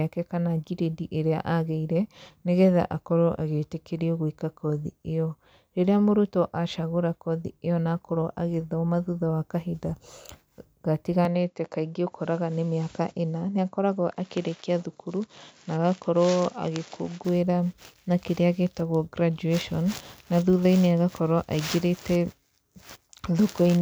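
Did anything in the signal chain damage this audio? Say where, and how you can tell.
Yes. From 11.25 to 17.25 s the speech dulls, drops about 5 dB and loses everything above 7.6 kHz: capture likely switched input to a poorer device.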